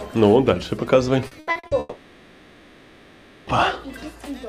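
From 1.27 to 1.74 s, packets went missing or arrived too late over and over, which is repeated packet loss (robotic sound). The receiver covered each hole by stretching out the sound it had just played. There are five gaps here, the longest 80 ms, and they add up to about 240 ms, so roughly half of this stretch is patched-in sound rather than the real audio. The result is choppy and mechanical, with short pieces missing.

Almost at once, from 1.79 to 3.50 s, the audio is replaced outright by a held-over continuation of the last sound for about 1.7 s, with no stretch of silence in between. This is most likely a long network dropout, with nothing arriving from the sender for that whole span. The continued sound fills the gap, and when real audio returns at 3.50 s, the original material from that 1.7 s stretch is simply gone.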